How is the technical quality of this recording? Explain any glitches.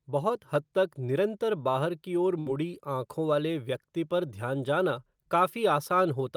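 One fault affects this speech recording. At 2.39 to 2.48 s, a burst of packet loss: the receiver stretches and fades the last sound for about 64 ms, then speech resumes with roughly 60 ms missing.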